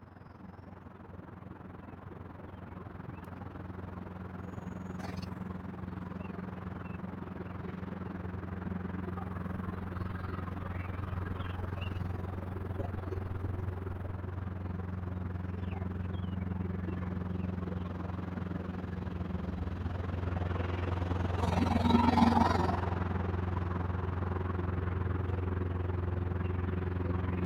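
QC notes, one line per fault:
throughout: overlap-add ripple, level pulsing about 11 dB around 20 times a second because frame overlaps don't sum evenly; a rough flutter with steady pitch.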